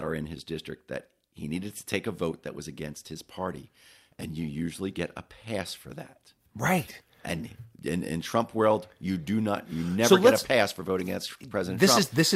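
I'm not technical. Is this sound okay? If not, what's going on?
Yes, nothing in this recording sounds wrong.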